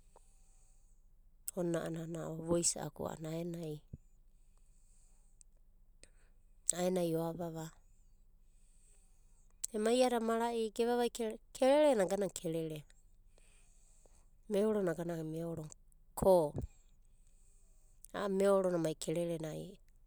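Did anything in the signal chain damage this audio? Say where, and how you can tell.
No, nothing in the signal chain stood out as damaging this recording when I listened to it.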